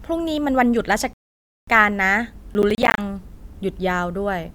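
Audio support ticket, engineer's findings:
Rebuffering stall, 1.13 to 1.68 s: playback drops to silence, then resumes exactly where it stopped. The player's buffer ran dry, adding 0.54 s with no audio lost.

Processor overload crackle, 2.54 to 2.98 s: gritty tearing from a run of short silent gaps. The CPU is missing deadlines on about fifteen buffers of roughly 10 ms each.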